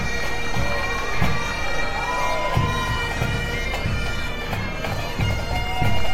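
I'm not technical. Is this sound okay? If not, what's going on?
No. Around 1.63 to 1.82 s there are frames out of order. The audio travels in small chunks, and two neighbouring groups of chunks, each roughly a tenth of a second long, arrived swapped and were played that way. So for about a fifth of a second the sound runs in the wrong sequence: a brief garbled flutter. Nothing is missing; the pieces are just shuffled.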